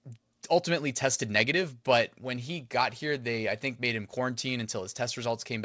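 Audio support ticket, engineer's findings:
Clock drift between sender and receiver: uneven little hiccups all through the speech, never settling. Far end's clock looks roughly 4% fast. Jitter buffer keeps filling, receiver has to trim to catch up. Probable component: sender's capture clock versus our playout clock. Worth checking drift compensation.

Repeated timing corrections: 0.18 s to 5.58 s, at about 104% speed. Receiver cutting short slivers out to stay in step, all trims in the same direction, spacing irregular. Probable component: jitter buffer's time-stretch logic, working hard because of the drift. Call path itself is G.722, nothing above 8 kHz, fits 64 kbps.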